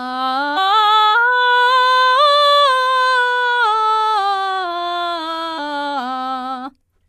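Damaged data in a compressed stream hits the music at 0.56 s and again from 5.58 to 5.60 s; corrupted frames throw the decoder out of sync, giving brief blips.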